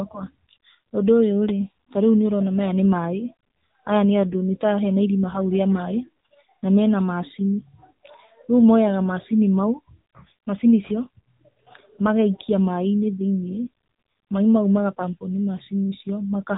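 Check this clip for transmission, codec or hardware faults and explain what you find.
One fault runs through the whole recording: AMR narrowband mobile codec damage, plainly audible from start to finish. The speech is band-limited at 4 kHz, with the buzzy, synthetic edge of a low-rate mobile mode, which fits roughly 8 kbps AMR-NB. The codec samples at 8 kHz and rebuilds speech from a vocal-tract model excited by a few pulses per 5 ms subframe. A spectrogram would show a hard ceiling at 4 kHz, with empty space above it.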